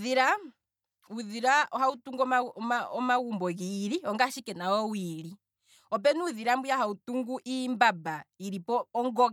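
No technical faults can be heard anywhere in the speech, so there is nothing to place in time order.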